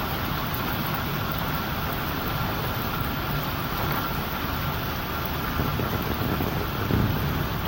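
No technical faults can be heard anywhere in the recording; the signal stays intact throughout.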